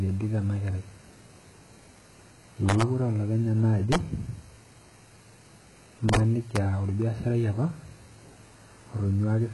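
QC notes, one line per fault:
Throughout: likely HE-AAC compression. Nothing is heard above 11.5 kHz, and the treble sounds rebuilt rather than real. S sounds turn gritty and lispy because copied upper bands don't line up with the true harmonics. The heavy damage fits a bitrate around 12 kbps.
2.69–2.82 s, 3.92–3.96 s, 6.09–6.17 s and 6.56 s: integer overflow. Loud peaks pass the integer limit by about 1, 3, 7 and 1 dB. Instead of being capped, the samples wrap to the opposite sign. Each one gives a violent crack, far harsher than clipping.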